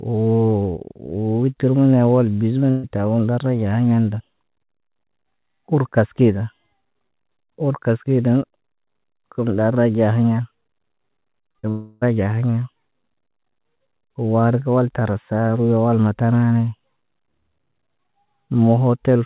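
At 2.70 s the speech briefly freezes into a held sound that fades over about 130 ms, then jumps ahead at 2.85 s with roughly 140 ms of speech simply gone. This is a burst of packet loss: several consecutive packets never arrived in time, so the receiver stretched the last sound it had to cover the hole before picking up the stream further on. Like the rest of the clip, the patched sound has nothing above 4 kHz, which fits a narrowband call codec such as G.711.

From 11.41 to 11.65 s the speech turns choppy and robotic, stuttering through four short holes, the longest about 38 ms, with around 42% of that stretch made up of filler rather than real audio. This is repeated packet loss with a robotic sound. Packets kept going missing in quick succession, and each gap was bridged by extending the previous fragment, so the speech loses its continuity and about 120 ms goes missing.

Almost immediately afterwards, from 11.69 to 12.03 s, the sound collapses into a fading continuation of the last fragment that carries on for roughly a third of a second without ever dropping to silence. 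The speech then resumes with about 320 ms absent. The likely cause is a long network dropout, during which no audio reached the receiver at all and the concealment simply kept generating sound until real packets returned.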